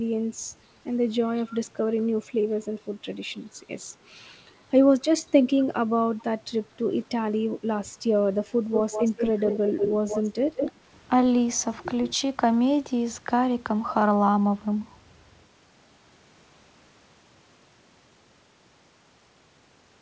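A faint delayed copy of the speech slips in at 1.46 to 1.58 s and again briefly at 5.6 to 5.64 s, lagging by 238 ms and sitting about 30 dB under the direct speech. This is echo leak: the far end likely played the call over a loudspeaker, and its echo canceller left some of the picked-up sound in the return path. From 8.74 to 9.92 s the echo turns much louder, only about 5 dB below the speech, with a shorter 170 ms delay.

At 10.0 to 10.05 s the speech briefly sinks, by roughly 15 dB at its deepest. This is speech suppressed in double talk: with both signals present, the canceller likely could not tell the talker from the returning echo and turned both down for that moment.

The 170 ms echo then returns at 10.08 to 10.22 s at about 10 dB below the speech, and at 10.56 to 10.71 s at about 5 dB below. All of it is heard through a band-limited call path with nothing above 8 kHz, which fits a G.722 codec.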